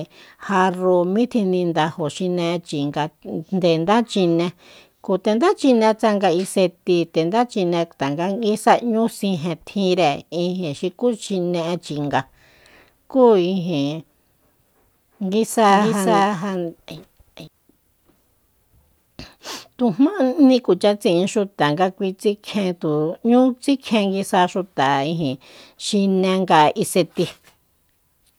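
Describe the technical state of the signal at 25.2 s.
At 25.2 s the speech signal is intact, with no audible fault at that moment.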